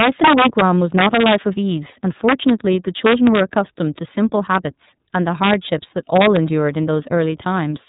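From the start the speech passes through the iLBC codec, coding each 30 ms frame separately, which fits its 13.33 kbps mode. Nothing above 3.8 kHz survives, and the voice sounds plainly rough and synthetic. At 0.00–0.61 s, 0.99–1.36 s, 2.29–2.50 s, 3.06–3.58 s, 5.43–5.54 s and 6.16–6.37 s, an integer overflow wraps loud peaks, overdriven by about 1 to 4 dB, to the opposite sign. This gives violent cracks far harsher than clipping.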